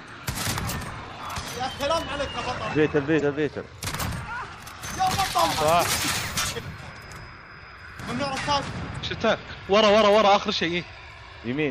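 At 3.20–3.22 s and 8.92–8.97 s, damaged data in the compressed stream makes the decoder lose frame sync, producing brief glitches before decoding recovers.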